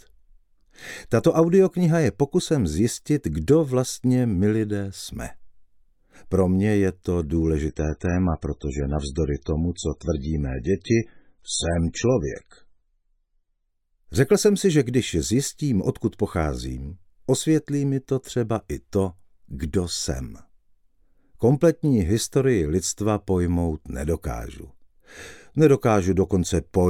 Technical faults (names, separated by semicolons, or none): adaptive stream at a lower bitrate